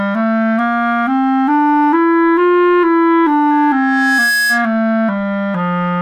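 At 3.50 s a loudspeaker feedback squeal begins and runs until 4.77 s. A single tone near 1.7 kHz appears and swells over roughly the first 0.7 s. It climbs until it is about as loud as the sound around it. A microphone was hearing the loudspeaker it was driving. At that frequency the loop gave back more than it took in, so the tone kept feeding itself. Then it stopped.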